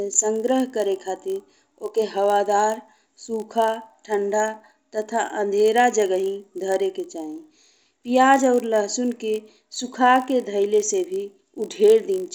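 Throughout the speech, a 50 Hz buzz rides on the signal and vanishes in pauses. This is a resampler restarted on every block: each 20 ms block was converted alone, consistent with 16 kHz to 48 kHz, leaving a small error at every block edge.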